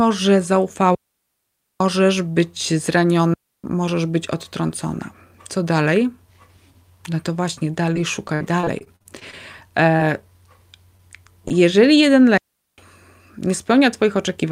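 At 0.95 s the speech cuts to near silence until 1.80 s, a digital wireless dropout lasting about 0.86 s. A second one runs from 3.34 to 3.64 s, about 0.30 s. Each time the link lost too much data, so the receiver muted behind a very short fade. The holes are clean, with no noise burst on either side. The waveform drops to a flat line, and the spectrogram shows a sharp blank vertical band across all frequencies.

From 7.93 to 9.35 s the audio turns choppy. This is repeated packet loss (robotic sound), with 12 separate gaps in quick succession. The receiver patched each hole by extending the last sound, filling 271 ms in total, about 19% of the stretch. Even so, 180 ms of real audio is gone, and the longest single gap is 59 ms. On a spectrogram the harmonics freeze into short repeated smears broken by vertical seams. The waveform shows copied, looping cycles in place of natural variation.

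Two brief short concealed packet losses follow, at 9.96–10.01 s and 10.97–11.01 s. Each time about 20 ms of audio never arrived. The decoder extended the preceding sound for roughly 25 ms and 17 ms, then blended back into the real signal. The result is a small smear or wobble, and a short consonant may be swallowed. Each event appears as a tiny patch of flattened, held harmonics.

At 11.48 s there is a short stall from a late packet. The jitter buffer ran dry, so the last sound was stretched by about 21 ms until the packet turned up. Playback then resumed from the same point, with nothing lost, though the delay grew by 21 ms. One sound is held slightly too long, with a slight buzz or dip, and its harmonics stretch horizontally for a moment.

At 12.38 s a third digital wireless dropout mutes the speech until 12.78 s, about 0.40 s of clean silence. It shows the same flat waveform and empty spectrogram band as the earlier two.

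Finally, from 13.46 to 14.45 s a jitter buffer speed-up plays the audio at about 105% speed. The buffer was holding more than its target, so the receiver trimmed around 50 ms by cutting out pitch-period-sized pieces. Pitch is unchanged, but the speech sounds slightly hurried. On the spectrogram the harmonics stay at the same height while the syllables are packed closer together in time.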